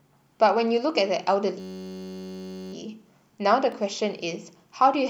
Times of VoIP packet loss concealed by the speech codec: none

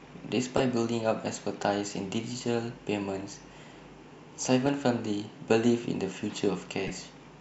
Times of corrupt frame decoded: 0.57-0.60, 4.66-4.69, 6.87-6.90

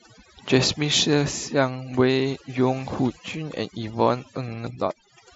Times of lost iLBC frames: none

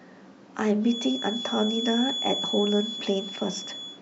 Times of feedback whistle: 0.80-4.01

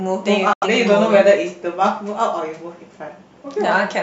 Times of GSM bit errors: none

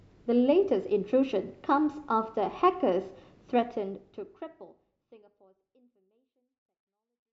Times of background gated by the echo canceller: none

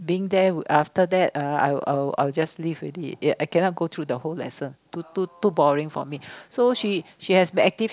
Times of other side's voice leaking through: none

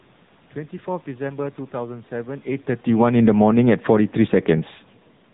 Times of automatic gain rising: 3.40-4.30

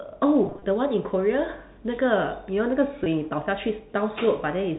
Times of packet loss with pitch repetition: 0.44-0.62, 3.04-3.06

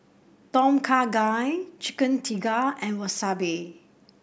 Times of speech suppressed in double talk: none

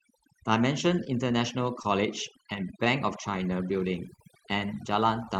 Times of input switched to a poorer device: none

